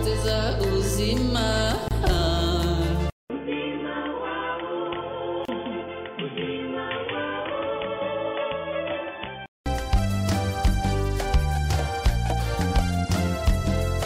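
At 1.88 s a gap at a join of encoded pieces opens, lasting about 28 ms, to 1.91 s. The sound stops dead and then resumes where it left off. Two separately encoded pieces were joined untrimmed. The encoder's start-up delay and end padding stayed in as silence. The codec smears its edges, so the silent part is shorter.

At 3.1 s a 200 ms silence falls. Then the sound turns dull and boxy. Nothing passes above 3.5 kHz. The level drops by roughly 10 dB. A new noise floor appears, about 50 dB under the signal. This is likely an input switched to a poorer device, such as a headset's call profile. The narrow, quieter tone holds until 9.66 s.

Inside that stretch, at 5.45 s, a second join gap of about 31 ms cuts in and lasts to 5.48 s.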